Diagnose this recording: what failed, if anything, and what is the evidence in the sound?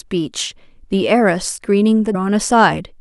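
At 2.14 s the speech jumps abruptly forward with a brief blip, as though a stretch of the recording has dropped out and the next part has been spliced directly against it. The likely cause is a stream segment skipped at the network or playback stage: one chunk of the segmented stream failed to arrive or load, and the player moved straight on to the following segment instead of stalling, losing that portion of the programme.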